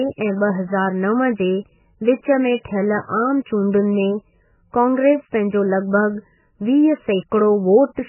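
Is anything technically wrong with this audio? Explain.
Yes. Throughout the speech, the sound is likely the product of MP3 compression at a very low bitrate, around 9 kbps. Starved of bits, the encoder has cut everything above 3 kHz and let weak frequency lines flicker between frames, leaving heavily dulled, watery, swirling audio with smeared attacks.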